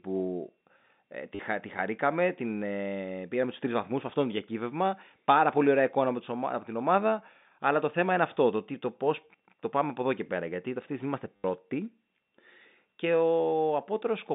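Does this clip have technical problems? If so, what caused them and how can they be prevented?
Yes, there's packet loss with the last packet repeated at 1.35–1.39 s, just before "τη χαρήκαμε την ε", and at 11.36–11.44 s, after "τη στιγμή είμαστε". The receiver replayed stale audio for 40 and 80 ms, which fits 10 ms packets. Adding jitter buffering, forward error correction or proper packet-loss concealment would prevent this.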